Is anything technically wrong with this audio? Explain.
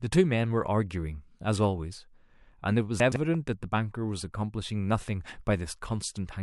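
Yes, the speech has two faults close together.

From 3.0 to 3.16 s there are chunks out of order. One 40 ms chunk arrived three chunks late and plays after material that should follow it, so 160 ms of speech is shuffled. Nothing is missing, but the sequence jumps, and there are three hard joins. On a waveform you'd see abrupt discontinuities at the 40 ms boundaries. A spectrogram shows thin vertical broadband lines and formant tracks that break and resume out of place.

From 3.34 to 3.37 s there is a loud pop. A single sharp transient peaks a few decibels above the speech, which carries on underneath. It is likely caused by a sudden voltage step, such as static or a switch, entering the signal path, with the following circuitry shaping it into a brief burst. The waveform shows one tall spike that stands out above the surrounding speech. On a spectrogram it appears as a bright vertical stripe across the full frequency range.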